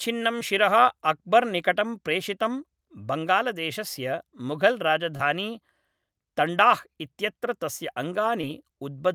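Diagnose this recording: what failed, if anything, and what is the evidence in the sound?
Short concealed packet loss occurred three times at the network stage, and the decoder hid each gap: 0.39 to 0.43 s, just before "शिरः अक्बर्निकटं प्रेषितम्", then 5.17 to 5.21 s and 8.41 to 8.45 s. Each gap is about 20 ms, which fits a single lost packet. The receiver extended the preceding speech for roughly 13, 24 and 18 ms before blending back into real audio, so each spot sounds like a brief smear or wobble.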